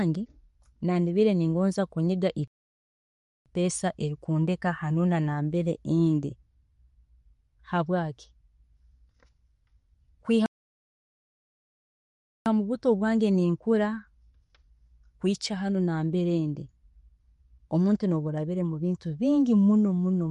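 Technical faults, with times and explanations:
Throughout: MP3 compression. The speech sounds watery and swirly, with s sounds turning into metallic chirps and the starts of syllables smeared rather than crisp. Nothing is left above 11.2 kHz, so the top end is dull and closed in. This is likely the work of an MP3 encoder starved of bits, around 48 kbps. It cut the treble at a fixed point and dropped quiet frequency detail that flickers in and out from frame to frame.
2.48 s to 3.46 s and 10.46 s to 12.46 s: playback stall. The speech halts in mid-flow and leaves dead silence. The first gap lasts about 0.98 s, straight after "nakubiire ningonzaa kunyiga", and the sound picks up again with "erikunteeka hanuuna nambere ndi". The second lasts 2.0 s and ends as "mubuto bwange" begins. Each gap is likely the player running out of data or being blocked, so the output stayed silent until it recovered and carried on.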